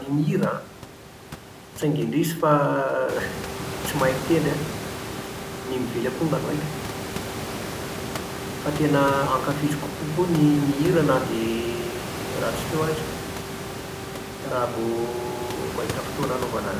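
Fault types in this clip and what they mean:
No faults can be heard in this speech recording.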